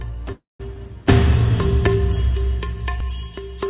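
At 0.32 s the audio stops advancing and a buzzy continuation of the last sound takes its place, decaying over roughly a quarter of a second and then dropping to about 170 ms of silence before normal sound resumes at 0.75 s. This is a call audio freeze. The likely cause is packets held up in transit, so the jitter buffer ran dry and the receiver extended the last sound. Nothing appears lost; playback picks up where it stopped, about 275 ms later. The call path's 4 kHz band limit, consistent with G.711 A-law, shapes both sides of the gap.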